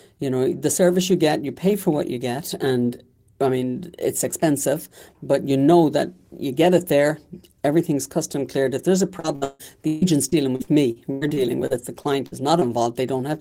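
Right after "there's a", from 9.19 s to 12.63 s, the speech breaks up from repeated packet loss (robotic sound). Over this stretch, data repeatedly went missing or arrived late, about fifteen times. Each hole was patched by extending the last received sound. About 0.8 s in total is concealed, roughly 23% of the span, and the longest single gap lasts 157 ms. The result is choppy, patched-over speech with pieces missing.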